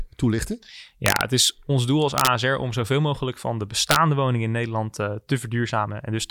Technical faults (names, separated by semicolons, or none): integer overflow